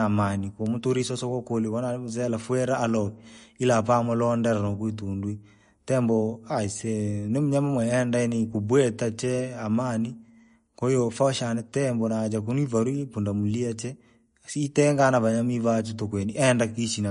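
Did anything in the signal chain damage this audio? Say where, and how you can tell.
Yes, at the codec stage. Throughout, nothing sits above 10.6 kHz and the speech sounds watery. That is likely MP3 compression, and the starved treble points to about 40 kbps.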